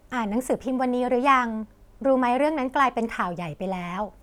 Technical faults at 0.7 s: none

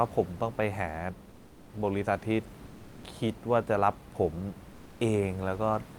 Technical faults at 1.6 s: comfort noise in place of the background

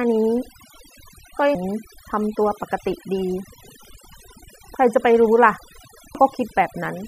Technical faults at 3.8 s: overdone noise removal; audio missing between chunks

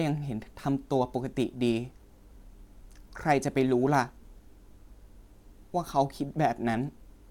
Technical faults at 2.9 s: none

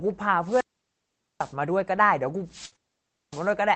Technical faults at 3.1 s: wireless microphone squelch dropout

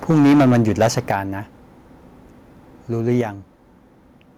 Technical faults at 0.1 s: microphone overload; microphone volume stepped down

